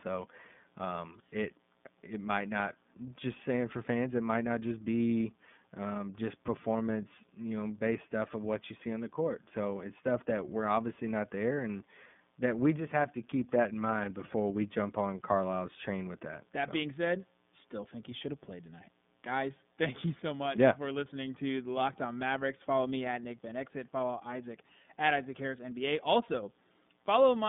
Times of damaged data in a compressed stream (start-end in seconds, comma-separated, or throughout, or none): none